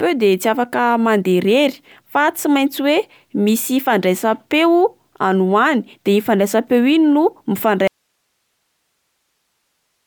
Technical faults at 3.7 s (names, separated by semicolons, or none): none